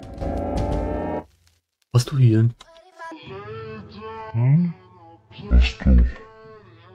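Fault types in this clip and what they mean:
Stereo read as mono: from 3.12 s to the end, the decoder stops separating the interleaved left and right samples and plays them one after another as a single channel, so each stereo frame is stretched into two output samples. The sound drops to half speed and a full octave (12 semitones) lower, turning slow and heavy, and a fainter mirrored copy of it appears in the upper half of the spectrum.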